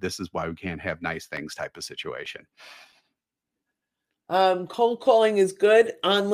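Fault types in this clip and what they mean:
CD scratch ticks: a disc blemish overwhelms error correction once per revolution, so the player patches it. After "why we can't have", eleven ticks a few milliseconds long recur about five per second from 1.15 to 3.37 s, showing as thin vertical spectrogram lines and brief waveform notches.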